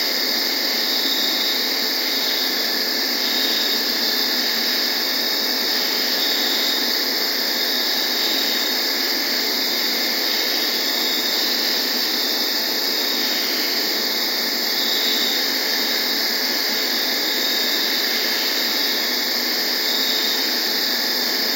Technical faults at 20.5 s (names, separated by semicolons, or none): none